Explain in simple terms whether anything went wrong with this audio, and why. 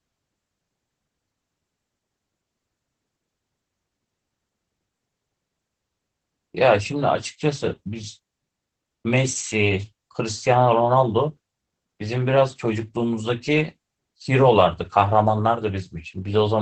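The speech sounds muffled and a little hoarse, with a faintly robotic edge that lasts from start to finish. This is Opus voice compression. To save space, the coder kept only the lower part of the sound, cutting everything above 8 kHz, and described the voice with a simplified model that works by predicting speech. Because so little data was allowed, the fine detail of the voice was rebuilt only roughly, which causes the dull, slightly buzzy quality.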